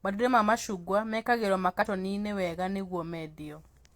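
Right after "macungwa mekagĩrwo", from about 1.81 to 1.87 s, there's a short glitch: damaged data in the compressed stream. The decoder hits corrupted frames, loses sync and hunts for the next header.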